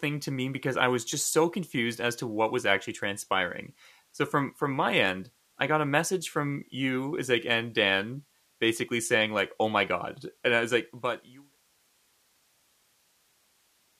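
No technical faults heard.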